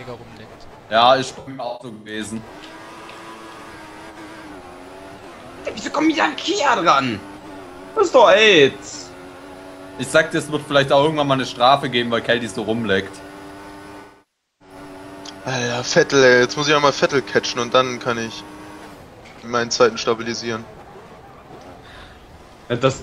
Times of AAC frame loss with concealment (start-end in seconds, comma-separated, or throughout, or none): 1.38-2.21, 14.00-14.75